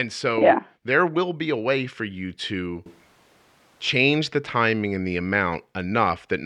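From 2.86 to 3.89 s the speech turns suddenly hollow and roomy, much quieter with more background noise, likely a switch to a distant microphone.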